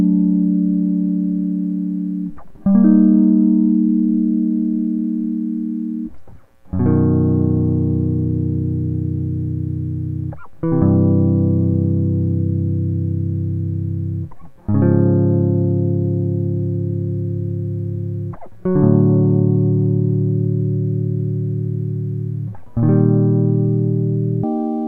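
A music clip, and right at the tail, from about 24.44 s to the end at 24.88 s, it jumps to double speed, the classic sign of audio read two samples at a time. The reader treats each pair of samples as a single frame, as if it expected two channels or wider samples, so the last roughly 0.44 s plays at 2x and an octave up.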